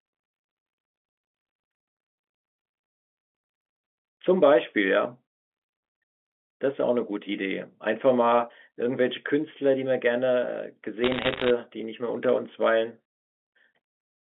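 From 11.04 to 11.50 s, bit errors on a digital phone line scatter sharp ticks over the speech: around one bit in a hundred flips, each corrupting a single sample of the mu-law telephone signal. Unlike packet loss, nothing drops out, and the speech underneath stays unchanged, only crackled.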